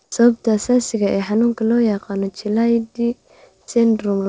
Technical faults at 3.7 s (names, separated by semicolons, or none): sound dropped by the voice detector